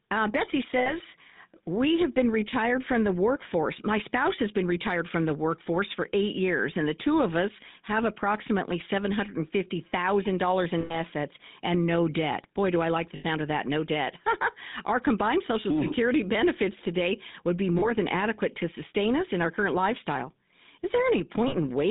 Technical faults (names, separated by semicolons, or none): GSM full-rate codec; lost GSM frames